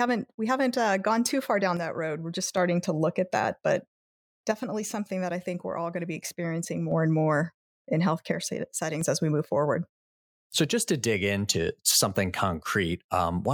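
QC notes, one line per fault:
1.77–2.57 s, 4.52–6.92 s, 8.32–9.01 s: one channel drops out. Level falls abruptly by about 6 dB, likely a lost stereo channel in the mono sum. The waveform shows abrupt steps down in amplitude, and the spectrogram is uniformly dimmer.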